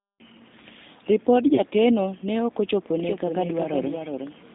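G.729 codec coding runs through the whole speech clip: the audio sits in a telephone band of about 150 Hz to 3.7 kHz, which fits an 8 kbit/s codec, and it sounds plainly rough and synthetic because each 10 ms frame is rebuilt from a vocal tract filter, a pitch predictor and a few pulses. VoIP packet loss concealed by the speech codec occurs from 1.55 to 1.60 s: a gap of about 20 ms, consistent with one lost packet, is filled by an extrapolation of the preceding sound that fades, and the decoder needs a short while to recover because each frame depends on the one before. A doubled audio track starts abruptly at 3.0 s and runs to the end: a full-band, uncoloured copy trails roughly 0.4 s behind at about 5 dB lower level, likely because the same audio was captured a second time through a slower path or left overlapping in an edit.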